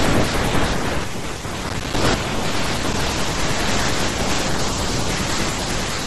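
From 1.69 to 2.01 s, a gritty crackle tears through the speech, made of many tiny dropouts to silence with hard edges. This is processor overload crackle: the processor repeatedly missed its deadlines, leaving around fifteen short gaps that fit buffers of roughly 5 ms.

At 2.92 s a brief stutter replays a 48 ms slice of speech, and the clip runs 48 ms longer as a result. This is repeated frames: a run of compressed frames, which fits two frames, was written or sent twice, so the decoder played them again.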